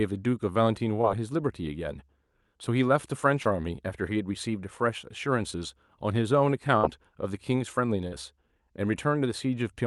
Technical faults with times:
1.01-1.05 short concealed packet loss
3.43-3.47 short concealed packet loss
6.77-6.85 burst of packet loss
8.07-8.13 short concealed packet loss

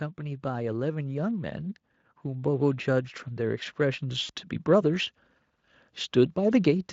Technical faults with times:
2.24-5.15 automatic gain rising
4.23-4.31 VoIP packet loss concealed by the speech codec

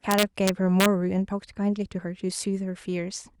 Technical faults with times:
0.11-0.86 integer overflow
1.09-1.20 skip ahead
1.66-2.07 jitter buffer speed-up

